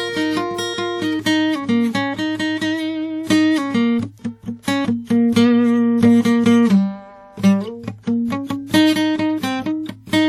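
Throughout the music, the audio has likely passed through WMA compression, a transform codec whose quantisation noise plainly spreads and rings, giving a washy hiss that swells with the signal. Nothing sounds above 18.3 kHz, and the damage fits a low bitrate near 48 kbps.

From 4.62 to 4.65 s comes pre-echo: a sharp attack landed late in a transform block, so noise sized for the loud moment also filled the quiet before it. A brief hiss, smeared over about 25 ms, leads into the blunted attack.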